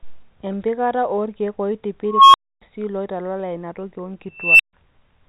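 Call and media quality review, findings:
Unstable filter, 2.05–2.62 s: squeal around 1 kHz swells over 0.29 s to clipping, then 0.28 s dropout. Recursive filter with bad coefficients; output grows without bound, overflows, mutes until reset.

Unstable filter, 4.36–4.73 s: same pattern with a higher tone, around 3 kHz. Builds over 0.23 s, clips, then 0.14 s silence. Same runaway-feedback mechanism, still audible despite the G.711 A-law telephone band, which passes nothing above 3.9 kHz.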